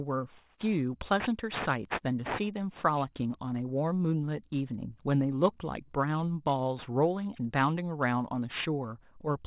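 Aliasing runs through the whole speech clip. Content above 4 kHz folds back into the band below it, which fits a drop from 24 kHz to 8 kHz with no anti-alias filter. Sibilants turn gritty and metallic, with folded energy about 15 dB below the signal.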